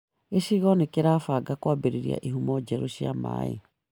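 There are no technical faults to describe at any point in this speech recording.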